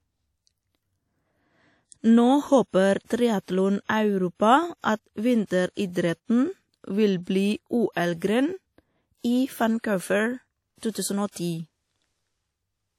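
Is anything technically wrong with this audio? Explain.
Yes. Throughout the speech there is likely WMA compression: long transform blocks smear quantisation noise into a washy, ringing hiss that breathes with the voice, with nothing above 18 kHz, which fits about 48 kbps. Unlike steady background noise, this hiss rises and falls with the signal.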